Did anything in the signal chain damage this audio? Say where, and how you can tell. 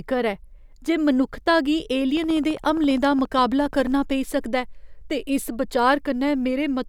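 Yes. A train of clicks, most likely interference coupling into the analogue wiring or a faulty connection or power supply, damages the speech from 2.17 to 3.88 s, between "ऐ जे मनुक्खता गी" and "पेई सकदा". About thirty similar pulses arrive at a steady 14.7 per second, peaking roughly 5 dB above the speech. That regular spacing and repeated shape mark an external periodic source rather than the speech itself, heard as a fast ticking laid over the speech.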